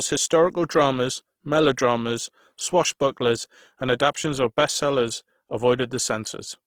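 A speech clip with Opus compression damage running throughout, plainly audible: voiced sounds come out grainy and rough, with a noisy texture where band energy has been filled in rather than left as holes. The full bandwidth survives, which fits Opus in its music-oriented CELT mode, likely at around 16 kbps.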